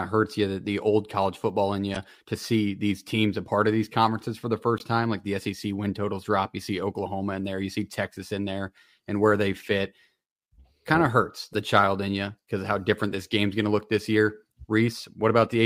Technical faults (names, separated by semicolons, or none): damaged data in a compressed stream